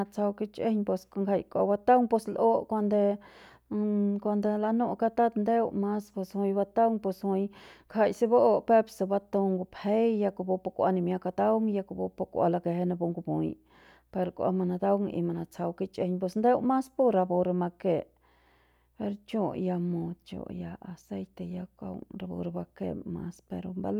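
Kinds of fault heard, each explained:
No audible faults anywhere in this speech recording.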